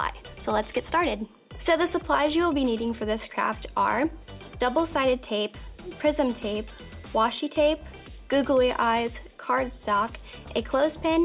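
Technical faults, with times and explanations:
Nothing here to flag; there aren't any technical faults to point to anywhere in the clip.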